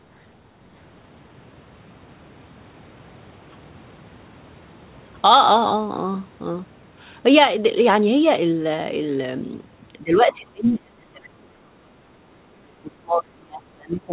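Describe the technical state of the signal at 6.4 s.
At 6.4 s the speech is intact, with no dropout, glitch or distortion, and the narrow telephone-style band with nothing above 4 kHz fits a G.711 mu-law call path working as designed.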